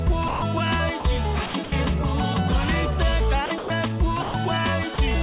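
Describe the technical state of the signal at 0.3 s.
At 0.3 s the sender's voice detector likely judged the sound to be background and stopped transmitting, so the sound dropped by the voice detector from 0.28 to 0.42 s. For those 140 ms the receiver filled the gap with comfort noise, a steady hiss standing in for the sound until the detector triggered again.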